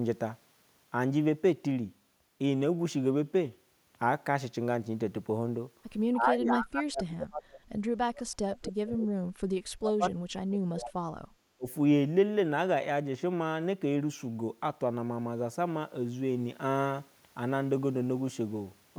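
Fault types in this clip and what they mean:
Speech suppressed in double talk: speech sinks by about 35 to 40 dB in four stretches between 6.12 and 11.67 s, likely from echo-canceller ducking.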